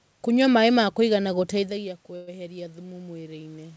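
From 1.13 s to the end, automatic gain rising: after the input level fell by about 15 dB, the gain control slowly lifted voice and room noise together, a gradually widening waveform envelope. At 2.16 to 2.30 s, a call audio freeze: the last sound stretches into a fading buzz for about 113 ms. It is likely caused by delayed packets emptying the jitter buffer. On a spectrogram it appears as smeared horizontal streaks, and nothing is lost afterwards.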